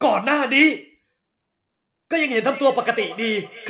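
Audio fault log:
2.43–3.70 s, feedback echo between two devices: the speech returns in discrete repeats roughly 300 ms apart, each thinner and more ringing, peaking about 18 dB below the speech. A nearby second device replays this microphone's signal, which gets recaptured. Room reverberation would blur rather than repeat cleanly.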